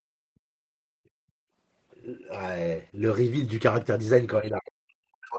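From 0.00 to 0.11 s, and again from 0.63 to 1.31 s, the background is gated by the echo canceller. The room sound drops by about 34 dB, then about 40 dB. The canceller clamped the microphone while the far end played, and the room returns once it released.

From 4.41 s to the end, the speech dips hard, by roughly 40 dB at its deepest. This is likely speech suppressed in double talk. The canceller mistook the talker for loudspeaker echo and turned the voice down with it.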